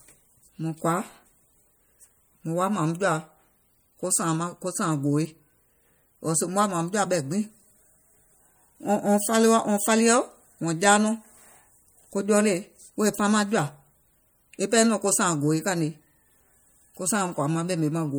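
MP3 compression runs throughout: plainly audible watery swirl as weak frequency components flicker between frames, likely from an encoder short of bits, fitting roughly 64 kbps.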